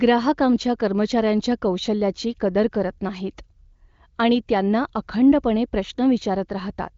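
Nothing goes wrong anywhere in this speech recording, and the only thing worth noticing is that the top end stops at around 7.5 kHz, which fits an AMR wideband (HD Voice) connection running at one of its higher rates.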